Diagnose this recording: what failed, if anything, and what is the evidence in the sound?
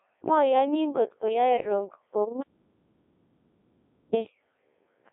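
The whole speech track has gone through a Codec 2 vocoder at the codec stage. It sounds robotic and buzzy throughout, with the heavy smearing you'd expect from a very low-rate mode, which fits Codec 2 at 1.6 kbit/s. The band sits at roughly 300 Hz to 3.5 kHz, with nothing above 3.7 kHz. Only pitch, voicing, energy and a rough spectral shape survive. The decoder rebuilds everything from sine waves, so the original waveform simply isn't there.

There's also an audio dropout to silence from 2.42 s to 4.14 s, so about 1.72 s of the recording is gone. It's plain silence, with no room tone or noise floor, and the speech cuts out and resumes mid-flow. The likely culprit is the input being lost upstream, through a device or link dropping, while the recorder kept writing silence. Nothing said in that stretch can be recovered.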